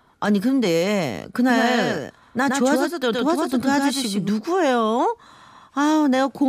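A doubled audio track runs from 1.49 s to 4.29 s in this speech recording: a second, full-band copy of the speech sits roughly a tenth of a second behind the original and somewhat quieter, giving a hard slapback with no decay or room colour. It appears and vanishes abruptly at those points, which likely comes from the same signal being captured again through a slower path, or from an edit holding two out-of-step copies.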